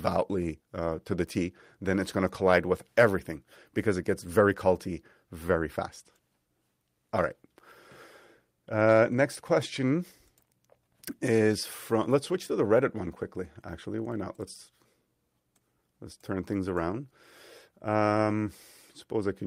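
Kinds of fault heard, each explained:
No technical faults can be heard in the speech; the signal holds steady throughout, with no breaks, dropouts or level disturbances.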